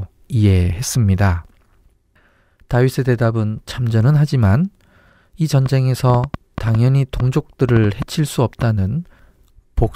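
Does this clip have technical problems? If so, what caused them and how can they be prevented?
Yes. A train of clicks runs from 5.66 to 8.63 s, about fifteen irregular pops at 4.4 per second, well above the speech, likely from interference or a faulty connection. Prevent it by shielding cables, moving away from noisy equipment, and using a stable audio interface.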